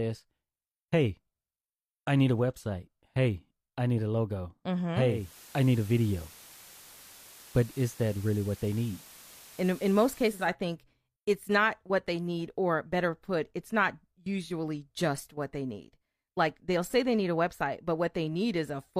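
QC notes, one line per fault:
5.04–10.55 s, digital radio blending to analogue: the receiver lost its digital stream and cross-faded over about 352 ms to the station's FM broadcast, returning to digital at 10.55 s. While on FM, the speech sits over a steady analogue hiss roughly 20 dB below the signal, because the FM path lacks the digital path's noise-free decoding. The level also shifts by about 1 dB, since the two broadcast chains are not matched exactly in gain.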